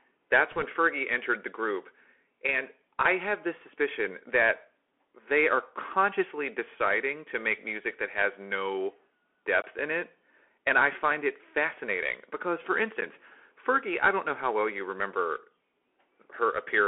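Throughout the recording the speech passes through a Bluetooth CVSD headset codec, and the damage is plainly audible. CVSD codes each sample as a single up-or-down bit, consistent with a 64 kbps narrowband link, and adapts its step size as it goes. The band is held to roughly 300 Hz to 3.4 kHz, so the sound is thin and boxy. Where the level climbs fast the step cannot keep up, giving gritty distortion, with a fine granular hiss beneath.

From 0.51 to 0.65 s there are bit errors on the Bluetooth voice link, at a rate in the region of one or two percent. Because every CVSD bit carries equally small weight and the decoder recovers from a wrong bit within a few samples, the flipped bits do not produce sharp clicks. Over that short stretch they add a rushing, crackling noise on top of the speech.

Two blocks of digital silence follow. The first runs from 9.62 to 9.64 s, a 20 ms gap just before "in it". 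The second is a 10 ms gap at 13.01 s, right after "it fascinating because for". In each, a run of output samples dropped out to silence, most likely because the audio buffer was not refilled in time. The signal cuts out and returns with no fade, and the longer gap is heard as a brief hole rather than a single tick.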